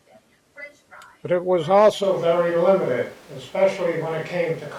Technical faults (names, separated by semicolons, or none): switch to a distant microphone